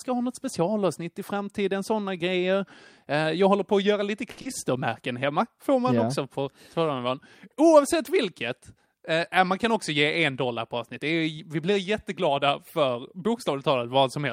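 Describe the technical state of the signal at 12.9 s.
Around 12.9 s the speech signal is intact, with no audible technical fault at that moment.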